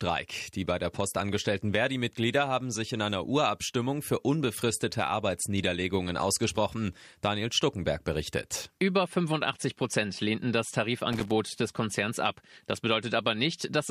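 Loose connector crackle appears from 11.13 to 11.32 s, a brief irregular burst of scratching over the speech lasting about 0.19 s. A worn or dirty contact in the signal path is making and breaking as it shifts, chopping the audio into ragged fragments.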